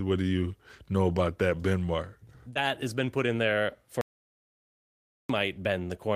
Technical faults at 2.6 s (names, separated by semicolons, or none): short concealed packet loss; lost packet rebuilt from error correction